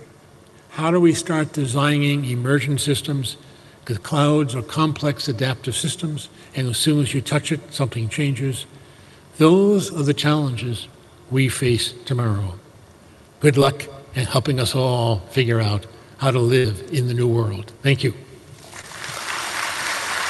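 This is audio sent over a call link, with the top end stopping around 12 kHz, which fits an Opus stream on a WebRTC path. There are two spots of short concealed packet loss, at 13.60 s and from 18.81 to 18.84 s. A few hundredths of a second of data arrived too late, so the receiver stretched the preceding sound to cover the gap, about 7 ms and then 19 ms, with about 10 ms and then 20 ms of audio lost, leaving a quick smear or wobble. The bigger problem is a burst of packet loss from 16.58 to 16.65 s. Roughly 60 ms went missing in a row, and the decoder padded it by continuing and fading the last sound, so you get a brief held buzz or hiss before the audio picks up again slightly further on.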